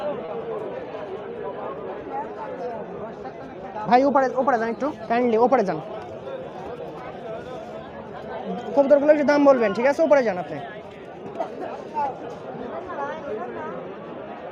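Clock drift between sender and receiver runs through the whole clip. The sending side's clock is slower than the receiving side's by about one and a half percent, so the jitter buffer keeps draining and the receiver has to keep adjusting timing. The result is recurring small hiccups at uneven intervals rather than one obvious break. On a waveform, the envelope shows occasional slight irregularities in spacing. A spectrogram shows tiny vertical seams where the time base has been nudged.

At 0.25 s comes a short stall from a late packet, lasting until 0.31 s. A packet arrived about 30 ms late, the buffer ran empty, and the receiver filled roughly 30 ms by holding the last sound until the data turned up. Nothing is lost, but that moment is stretched, with a faint buzz or dip. The spectrogram shows a brief band of frozen, smeared partials. The waveform shows a short repeating or flattened stretch.

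From 1.74 s to 14.26 s there are repeated timing corrections. The receiver keeps inserting short repeated slices, all in the same direction and unevenly spaced, to keep pace with the slower sender. The playback runs at about 98% speed, and around a fifth of a second is added in total. The tempo sounds slightly unsteady, with faint hiccups. The waveform shows small duplicated segments scattered through the span, and the spectrogram shows thin discontinuities where slices were joined.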